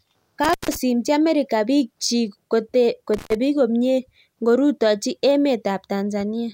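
At 0.44 to 0.76 s and again at 3.14 to 3.35 s, the speech drops out from an intermittent contact: a loose connection opening for about 140 and 120 ms, crackly edges, faint hiss underneath.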